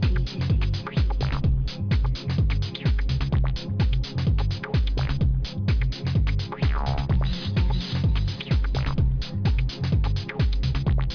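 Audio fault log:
throughout, aliasing: The spectrum runs hard up to a band edge at 5.5 kHz, which points to a rate drop to 11 kHz without filtering first. Content above that edge folds back to unrelated pitches, roughly 20 dB below the signal, making bright sounds gritty and metallic.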